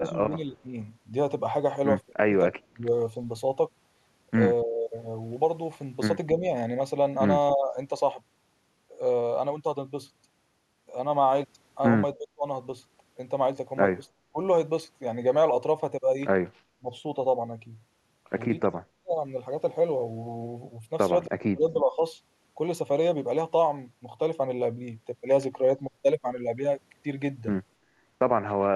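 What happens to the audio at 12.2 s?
Around 12.2 s the speech is pulled down sharply in a brief dip lasting from 12.14 to 12.45 s, a deep cut of roughly 30 dB over about a third of a second before the level recovers. This is likely speech suppressed in double talk: with both ends active at once, the echo canceller could not tell the near talker apart from loudspeaker echo and attenuated everything it picked up, taking the wanted speech down with the echo.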